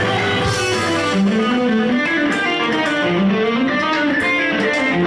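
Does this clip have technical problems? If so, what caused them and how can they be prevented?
No, there are no technical problems.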